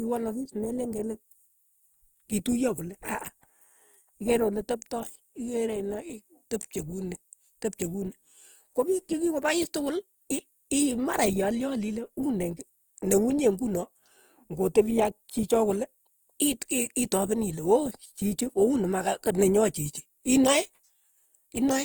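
Throughout the speech there is a plainly audible rough, grainy, noisy texture, with little swirl and the top end still reaching 20.2 kHz. The likely cause is Opus compression in its music mode, filling starved bands with folded or noise content at a low bitrate around 24 kbps.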